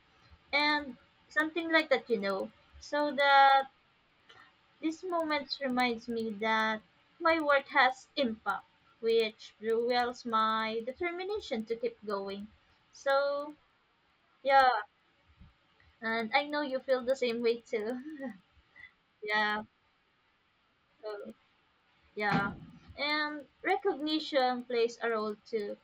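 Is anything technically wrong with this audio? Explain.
Yes. Throughout the speech, the resampler restarted on every block (16 to 48 kHz, 100 ms blocks), so each block edge ticks, 10 per second, as faint vertical spectrogram lines.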